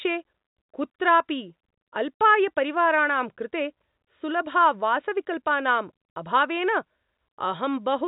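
No faults to report; the speech sits in the normal G.711 telephone band, with nothing above 3.8 kHz.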